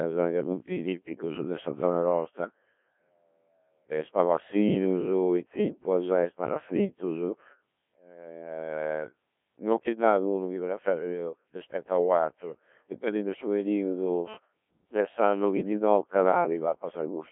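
Robotic, buzzy speech throughout, with nothing above 3.6 kHz: a Codec 2 vocoder rebuilding the voice from pitch and envelope, consistent with roughly 1.3 kbit/s.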